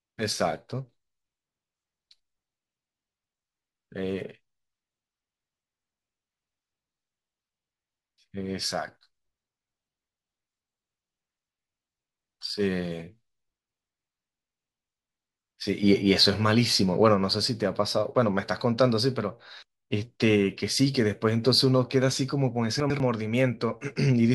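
Between 22.8 and 23.0 s, two adjacent 100 ms chunks of the speech were delivered in the wrong order: one arrived a single chunk late and was played after the chunk that should have followed it. This is chunks out of order. No audio goes missing, but the swap leaves three hard joins where the waveform jumps, heard as a brief jumbled moment near the end of the clip.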